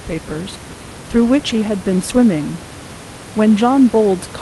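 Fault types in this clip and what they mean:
Nothing's wrong with this one; you can just hear a bit of the room's own background noise sitting about 17 dB under the speech, which is part of the recording.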